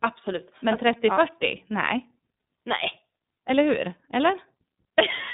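Throughout the speech, the iLBC codec confines the sound to 150 Hz to 3.7 kHz, with nothing above 3.8 kHz. Coding each frame independently, consistent with 30 ms frames at 13.33 kbps, leaves a plainly audible rough, synthetic edge that plain telephone band-limiting lacks.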